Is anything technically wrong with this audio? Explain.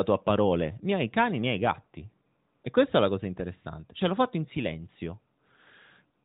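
No, nothing here is faulty: the speech comes through the AMR narrowband mobile codec path as expected, band-limited to 4 kHz with only light coding colouration, which fits the 12.2 kbps mode.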